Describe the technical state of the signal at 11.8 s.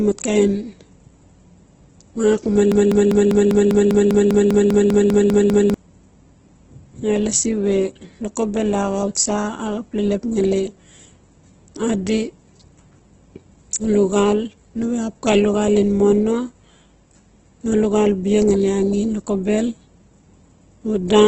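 At 11.8 s, as across the whole clip, the speech shows heavy damage, likely from Opus compression in its CELT mode at a low rate near 12 kbps. Bit-starved bands are refilled with folded or noise content, so it sounds rough and grainy, with nothing above 8.2 kHz.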